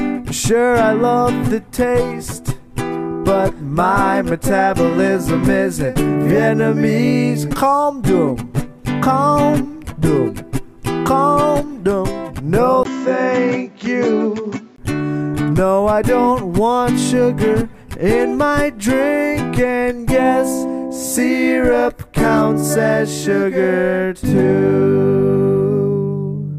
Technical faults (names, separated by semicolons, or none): input switched to a poorer device